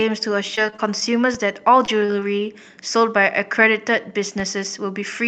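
Repeated packet loss (robotic sound) runs from 0.55 to 1.03 s. Five gaps, the longest 24 ms, were patched by extending earlier sound, covering about 17% of that span and leaving a choppy texture with pieces missing. A DC step starts at 1.35 s, where the waveform's zero line jumps and holds offset until 4.40 s. Each shift is a low thump, while the sound itself carries on unchanged. Short concealed packet loss strikes at 1.85 to 1.90 s and again at 2.06 to 2.10 s. Each time, about 20 ms went missing and was filled by continuing the preceding sound, which is heard as a brief smear or wobble. A short stall from a late packet follows at 2.20 to 2.23 s. The jitter buffer emptied, so the last sound was stretched about 15 ms until the packet arrived, with nothing lost, giving a slight held buzz. Through all of this the audio stays limited to about 8 kHz, which fits an Opus call path at roughly 32 kbps.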